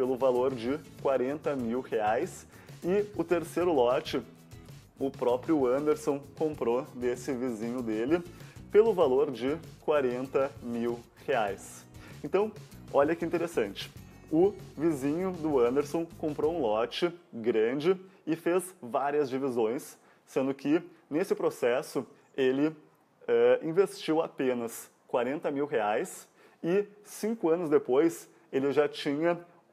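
Nothing in this audio stands out as a technical fault at any point, so there's nothing to flag here.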